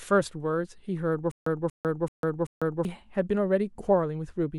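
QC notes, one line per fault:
1.31–2.85 s, stutter with silent gaps: one 234 ms fragment of speech plays four times, each followed by 150 ms of digital silence, so it comes back on an even 384 ms cycle. This is likely a player or stream stalling, replaying its last fragment at each retry and then running empty. The speech meant for that stretch is lost. A plain dropout would resume with new speech, but here identical repeats surround every gap.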